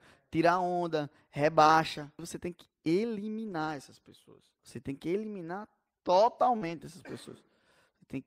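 From 0.53 to 1.75 s there are scattered short gaps: about three brief dropouts, none much longer than 20 ms, totalling 60 ms of missing audio. The receiver bridged them by extending the preceding sound, so the speech stays clear but picks up small ticks and hiccups.

At 3.47 to 3.53 s a lost packet was rebuilt from error correction. The following packets carried low-bitrate copies, and the decoder played those in place of roughly 40 ms that fits two packets. There is no gap, but the passage turns briefly rougher and noisier.

At 6.57 to 6.63 s, short concealed packet loss fills 40 ms that never arrived with 44 ms of synthesized continuation, heard as a brief smear or wobble. Overlapping it from 6.61 to 6.71 s, more lost packets were rebuilt from error correction, about 60 ms consistent with three packets, adding a coarse, grainy texture before clean audio resumes.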